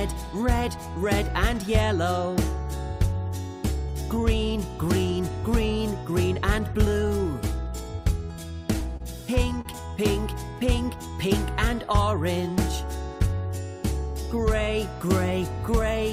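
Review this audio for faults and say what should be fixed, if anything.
Two short stalls from a late packet, at 8.97 s and 9.61 s: the jitter buffer ran dry, so the last sound was stretched by 30 ms and 38 ms, with no audio lost. A deeper or adaptive jitter buffer would absorb this arrival delay.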